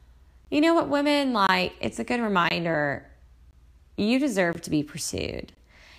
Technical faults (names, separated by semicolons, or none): gap between chunks